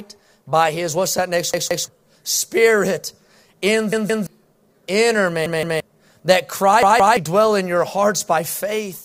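Repeated buffers at 1.54–1.88 s (after "his what's that next"), 3.93–4.27, 5.46–5.80 and 6.83–7.17 s (before "dwell in your"): a 0.17 s piece, which fits an 8192-sample buffer, replays twice with hard joins, stuttering and dropping about 0.3 s of speech.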